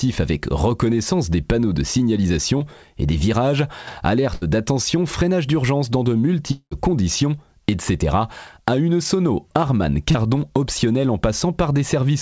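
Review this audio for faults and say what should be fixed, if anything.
Short concealed packet loss: brief smears at 2.58–2.62 s, just before "et des virages", and at 10.11–10.16 s, just before "optionnelle en". About 20 ms and 40 ms of audio never arrived in time, and the receiver bridged each gap by extending the preceding sound. A slightly deeper jitter buffer or in-band forward error correction would cover holes this short.

Burst of packet loss: at 4.34–4.43 s the sound stalls into a held, fading tone, then resumes at "d'attention freinage d'urgence dans" with roughly 80 ms skipped. Several consecutive packets were lost, and concealment stretched and faded the last sound. Redundant packet transmission or stronger forward error correction would help.

Long network dropout: from 6.51 to 6.73 s the sound stretches into a fading buzz and hiss, ending in a short stretch of silence, with about 200 ms missing when audio returns. 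The likely cause is a long network dropout. A more stable network route or link would prevent it.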